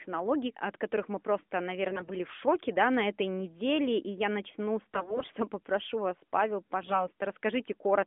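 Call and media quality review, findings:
AMR bit errors at 1.91–2.13 s and 4.94–5.29 s: hoarse, scratchy, gargling sound with pitch and level roughly held. The harsher first burst suggests about 10% corrupted bits, the second about 7%. Flipped low-priority frame bits misplaced excitation pulses and skewed gain and spectral parameters in the AMR-NB decoder. The 200 Hz–3.5 kHz band sits within the AMR-NB narrowband limit; codec running at 12.2 kbps.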